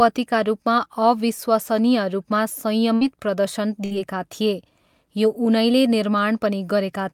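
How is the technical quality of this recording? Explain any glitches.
The speech is interrupted twice by a burst of packet loss, at 2.95 to 3.04 s and 3.85 to 3.94 s. Each time, the sound stalls into a brief, fading smear of whatever came just before, for about 54 ms and then 60 ms, before the speech picks up again with about 60 ms of material gone. Several consecutive packets were dropped, so the receiver stretched and faded the last audio to fill the gap and then skipped ahead.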